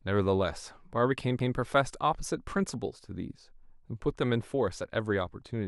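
A CD skip at 1.39 s: a knock or a flaw makes the laser jump onto another turn of the spiral, so the speech briefly mutes, ticks, and resumes elsewhere.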